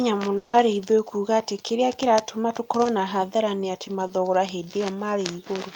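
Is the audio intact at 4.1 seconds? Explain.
No. Between 4.07 and 4.11 s, just after "na hathara nĩ atĩ", there is a short concealed packet loss: about 20 ms of the speech failed to reach the decoder in time. The receiver covered that 20 ms gap by extending the sound that had just played, then crossfaded back into the real signal. This is heard as a fleeting smear or wobble in the speech, and any brief consonant in that gap may be lost.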